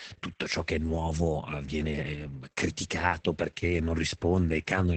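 From start to end, the speech carries heavy Opus voice compression. The band stops near 8 kHz, so the top sounds dull. The linear-prediction coder spends too few bits on the excitation, leaving the voice hoarse and faintly robotic. That fits a rate around 10 kbps.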